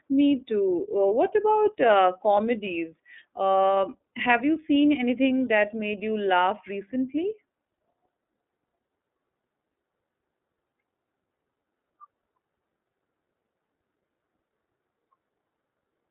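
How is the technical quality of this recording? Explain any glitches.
The speech has been carried through a narrowband telephone path, so its technical quality is limited. One fault runs for the whole recording: the iLBC codec. The band is confined to roughly 250 Hz to 3.6 kHz, with nothing above 3.7 kHz, which removes sibilance and air and thins the low end. iLBC codes each frame's excitation independently rather than predicting from the previous frame. The plainly audible roughness and synthetic edge fit its 30 ms frame, 13.33 kbps mode.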